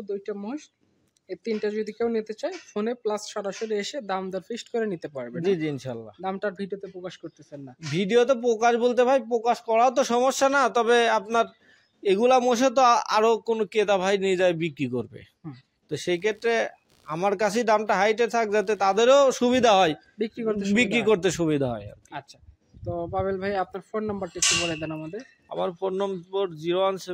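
Between 16.11 and 19.05 s, a change in the computer's load disturbs the ground it shares with the audio circuit. This computer activity noise is a faint buzzing chirp, pulsing roughly 70 times a second about 40 dB below the sound.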